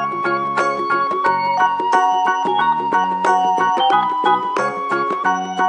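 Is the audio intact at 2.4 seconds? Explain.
Yes, the audio is intact at 2.4 seconds, with no dropout, click, distortion or other fault at that moment.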